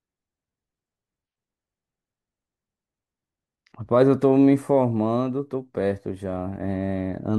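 No technical faults can be heard anywhere in the recording; the signal stays steady and continuous from its opening moment to its close.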